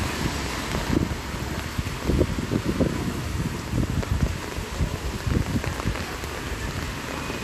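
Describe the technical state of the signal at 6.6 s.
At 6.6 s the audio is inside a burst of DAB burbling, from 6.59 to 6.82 s. Bit errors have slipped past error correction and corrupted sub-band samples and scale factors. Single bands get short blips of noise or jump in level. Underneath, MP2 compression is audible. The sound is dull and granular, with upper bands flickering. It likely comes from a low Layer II bitrate, around 80 kbps.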